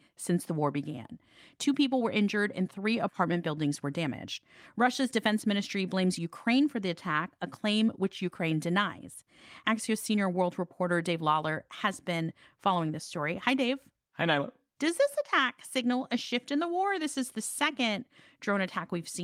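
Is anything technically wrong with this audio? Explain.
Yes. Throughout the clip there is clock drift between sender and receiver. The sender's clock runs a few percent fast, so the receiver's buffer keeps overfilling. Small timing hiccups recur unevenly.

From 0.29 s to 19.22 s, repeated timing corrections trim short pieces of the speech to keep pace. The delivery runs at 104 percent speed.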